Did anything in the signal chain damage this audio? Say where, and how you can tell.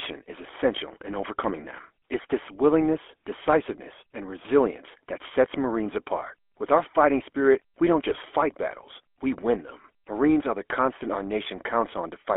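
Yes. Throughout, the GSM full-rate codec gives a buzzy, gravelly roughness on a 300 Hz to 3.4 kHz line band, which fits 13 kbps pulse-excited coding.

GSM bit errors hit the link from 8.11 to 8.17 s, between "fighting spirit we don't" and "fight battles we win". Corrupted filter, pitch or gain values there produce a squawky gargle, consistent with about three damaged frames.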